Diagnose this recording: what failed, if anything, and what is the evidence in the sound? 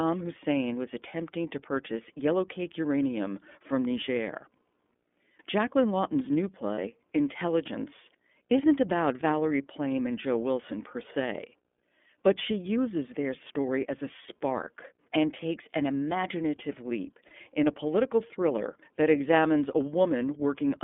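The whole recording has passed through the iLBC codec, a codec-stage fault. The audio is confined to roughly 200 Hz to 3.5 kHz, with nothing above that line band. The speech has a plainly audible rough, slightly synthetic texture from coarse coding of the excitation signal. This fits iLBC's 13.33 kbps mode with 30 ms frames, where each frame is coded independently and fine spectral detail is discarded.

Two network-stage dropouts show up as lost iLBC frames, at 6.75 to 6.78 s and 17.27 to 17.32 s. Each covers about one 30 ms frame. In each gap the decoder's concealment repeats the last pitch cycle blended with noise, so it sounds like a brief held, faintly buzzy vowel rather than silence. Because iLBC frames do not depend on earlier ones, the speech returns to its normal coded sound immediately after each gap.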